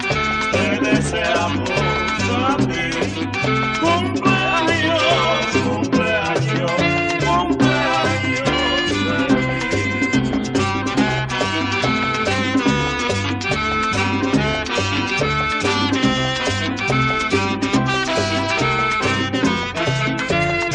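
No technical faults turn up anywhere in the clip. Nothing in it points to a dropout, a glitch or any other break in the signal path.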